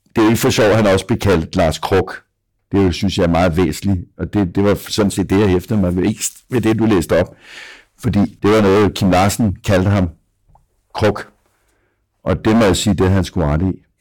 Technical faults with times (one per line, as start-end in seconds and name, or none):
0.00-14.01 hard clipping